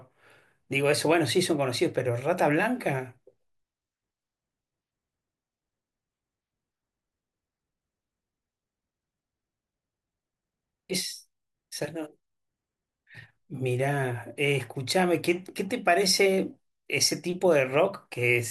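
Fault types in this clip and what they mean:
No faults detected in the speech; nothing to report.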